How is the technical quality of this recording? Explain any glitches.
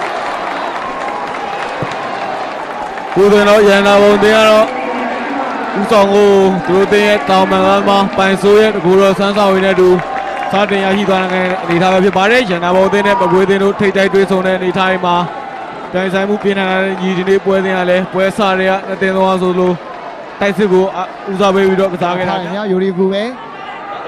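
No glitches or technical faults can be heard anywhere.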